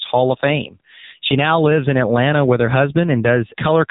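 From start to finish the speech carries the sound of the AMR narrowband mobile codec, and the damage is heavy. The band stops at about 3.8 kHz, so sibilants and consonant detail are gone and the voice sounds boxed in. The buzzy, synthetic texture points to a low setting, around 6.7 kbps, where the codec rebuilds the voice from a vocal-tract model and a few pulses per 5 ms subframe instead of the real waveform.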